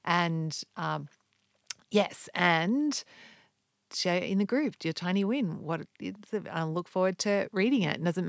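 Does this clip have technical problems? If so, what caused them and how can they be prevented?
No, the speech shows no technical faults, having simply passed through a call's normal microphone processing, which trims the lowest bass and leaves nothing above 8 kHz.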